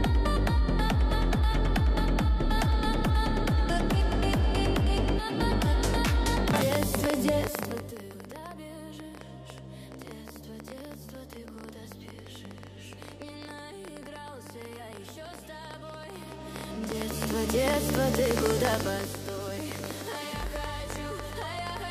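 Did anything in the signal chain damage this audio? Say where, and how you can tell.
Yes. Something, likely electrical interference or a struggling interface at the analogue or converter stage, injects a train of clicks from 6.51 s to 21.78 s: about 11.5 per second at irregular spacing, around two hundred in all, peaking roughly 15 dB above the signal and ticking even through the pauses.

A gain stage applying level changes per buffer without smoothing causes zipper noise at 7.40–8.11 s, where the level drops roughly 15 dB in 2 dB steps at about 15 per second. It happens again at 16.06–17.56 s, where the level rises by a similar amount at about 7 steps per second. Each step leaves a small click, heard as zipping while the level moves.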